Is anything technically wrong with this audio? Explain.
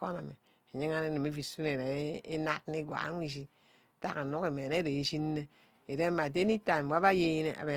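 Yes, plainly audible Opus compression runs through the whole clip. The speech turns grainy and rough, noisy rather than swirly, likely because the music-mode encoder keeps each band's energy but fills starved bands with noise or folded copies, which fits a rate around 24 kbps.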